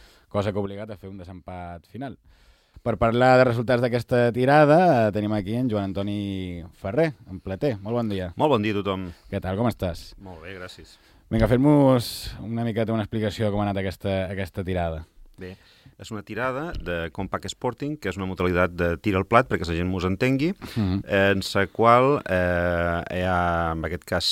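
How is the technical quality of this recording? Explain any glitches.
Two sudden gain jumps mar the recording. From 0.66 to 2.74 s the level drops by about 9 dB, then from 18.4 s to the end it rises by about 6 dB, sound and background noise shifting together. The likely cause is a gain change applied between adjacent samples without a ramp.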